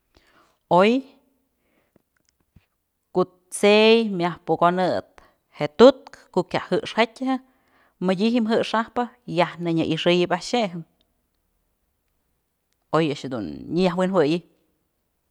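No technical faults can be heard anywhere in the speech.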